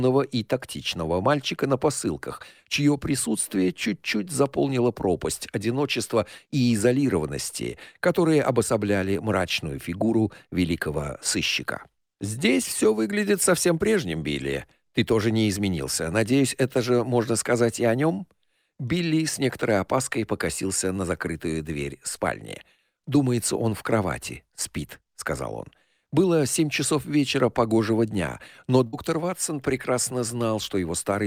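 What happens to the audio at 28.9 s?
The sound briefly smears into a held, fading continuation from 28.87 to 28.95 s, then jumps ahead with about 60 ms missing. This is a burst of packet loss: consecutive packets never arrived, so the receiver stretched the last audio for about 57 ms while turning it down.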